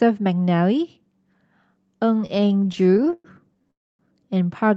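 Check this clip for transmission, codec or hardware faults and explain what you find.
Two transmission faults are present, both near the end of the speech. The audio is band-limited at about 8 kHz, as the call codec path leaves it.

Repeated stalls (stutter) run from 2.21 to 3.71 s. Packets arrived late, the jitter buffer kept emptying, and the last sound was stretched across 28 short gaps of up to 114 ms. The speech drags and judders.

A call audio freeze follows from 3.71 to 4.01 s. The receiver filled 284 ms, fading almost at once into near silence. A held-up packet stream is the likely cause.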